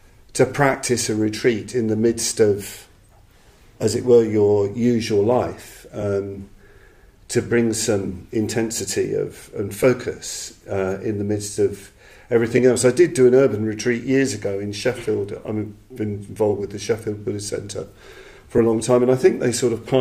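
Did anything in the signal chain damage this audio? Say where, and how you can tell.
Yes, on the Bluetooth link: lost LE Audio frames. Short noisy smears at 0.73, 9.83, 12.57 and 18.57 s, each about 7.5 ms (one frame's worth), plus a 15 ms one from 6.01 to 6.03 s. The LC3 decoder filled each gap by replaying the last spectrum with random signs.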